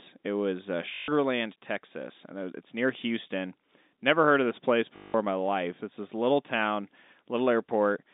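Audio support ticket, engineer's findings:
Packet loss with last packet repeated, 0.94–1.08 s after "was uh" and 4.96–5.14 s before "in my life". The receiver's concealment loops one packet across 140 and 180 ms gaps. Robotic buzz near 50 Hz that fits 20 ms packets. The G.711 telephone band is audible underneath.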